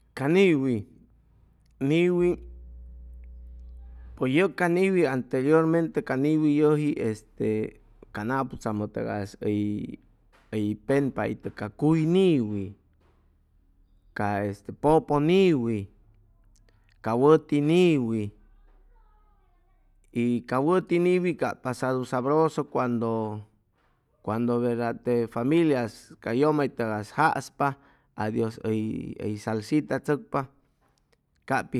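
From 2.19 s to 4.20 s, a mains hum sits under the speech, ending just before "pues yʉg ca niwi". The power line has leaked into the signal through a ground loop or a nearby transformer, leaving a steady 60 Hz tone with some low harmonics, roughly 20 dB below the speech. Its fixed, unwavering pitch separates it from low-frequency rumble caused by wind or handling, which is broadband and fluctuates rather than holding one note.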